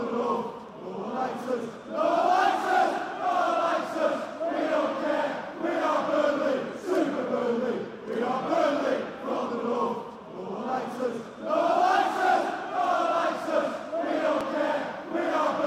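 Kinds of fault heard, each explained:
Dropped buffer (overrun): at 0.69 s and 14.41 s the sound jumps forward with no gap, losing a few milliseconds and then around 15 ms. The likely cause is the hardware overwriting samples before the program collected them, splicing both sides together.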